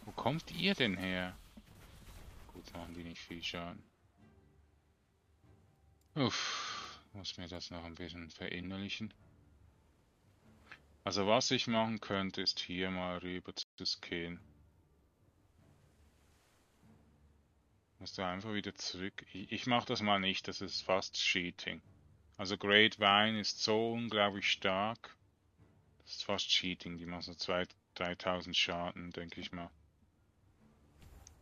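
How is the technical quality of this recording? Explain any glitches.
There is one glitch, a playback stall from 13.63 to 13.78 s. The player likely starved of data or was blocked, so output dropped to silence for about 0.15 s before the sound resumed.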